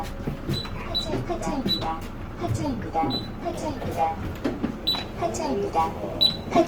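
From start to finish, the sound is rough and grainy, with tonal parts smeared into hiss instead of the swirling, hollow quality of MP3. This is likely Opus compression in its CELT music mode at a rate that fits about 24 kbps. When bits ran short, the encoder kept each band's energy but filled detail with folded or noise-like content. A spectrogram shows full bandwidth up to about 20.4 kHz with few holes, but harmonics look blurred and speckled.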